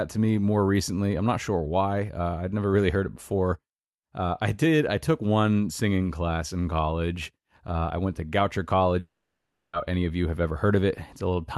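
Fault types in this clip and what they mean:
Long network dropout: packets most likely stopped arriving for about three quarters of a second, leaving the receiver nothing real to play from 8.99 to 9.75 s. It stretches the last sound into a short buzz that fades, then about 0.58 s of near silence follows, and the speech resumes at "any of you have" with the missing stretch simply gone, while around it the call codec's top end stops near 12 kHz.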